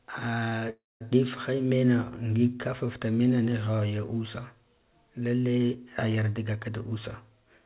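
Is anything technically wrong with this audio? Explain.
Yes, there are three technical faults in this speech.

From 0.50 to 0.54 s there is a short stall from a late packet. A sound is held about 18 ms too long, with a faint buzz, and nothing is lost. A packet arrived late, the jitter buffer briefly ran dry, and the receiver stretched the last sound until it came.

From 0.70 to 1.02 s there is a call audio freeze, just before "difhe mena ngig kaf". The last sound carries on as a fading buzz and then about 210 ms of silence, adding roughly 307 ms in all before the speech resumes intact. The likely cause is packets held up in transit, so the jitter buffer emptied while it waited.

From 6.93 s to the end, after "gaka ka", there is a jitter buffer speed-up. The speech runs about 7% fast and sounds slightly hurried, but the pitch is unchanged. The buffer had more audio than it aims for, so the receiver removed about 50 ms in small pitch-period slices to cut the delay.

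Throughout, the call path's band limit means nothing is heard above 4 kHz.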